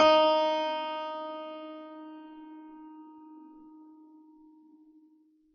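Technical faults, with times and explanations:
Throughout, low-bitrate audio saved at a high bitrate: the music carries the coarse coding damage of a very low-bitrate encoder, yet it sits in an MP3 whose rate points to around 256 kbit/s. The likely cause is an earlier AAC encode at roughly 24 kbit/s that was later re-encoded to MP3. The second pass cannot restore what the first discarded. Unlike an ordinary low-bitrate file, the size and nominal quality here do not match what is heard.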